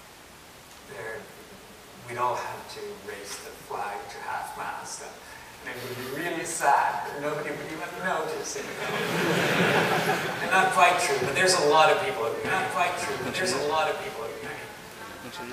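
It's a single clean track until 12.45 s, when a doubled audio track kicks in and stays to the very end: a second full-band copy of the same material trails the original by about two seconds, roughly 5 dB quieter, with no decay or room colour, and it starts abruptly. The likely cause is the audio being captured a second time through a slower path, or an edit leaving two out-of-step copies stacked.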